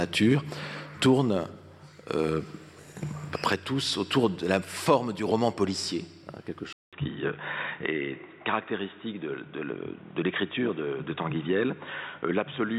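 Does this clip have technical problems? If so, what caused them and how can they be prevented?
Yes. At 6.73 s the audio drops out for 200 ms, then continues to the end with nothing above 3.8 kHz, a little quieter and over a new background noise well below the signal. This is most likely an input switched to a poorer device. A codec or filter change would narrow the band without the gap, the fresh noise and the level shift. Lock the recording input to one device and disable automatic switching to headset call profiles.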